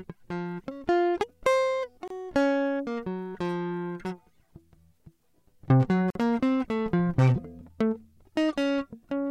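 At 2.08 to 2.10 s and 6.10 to 6.15 s, the music drops out for 26 ms and then 49 ms. These are gaps at a join of encoded pieces, where leftover encoder delay and end padding were never trimmed. Each appears as a brief full-band blank column with smeared edges, recurring every 4 s.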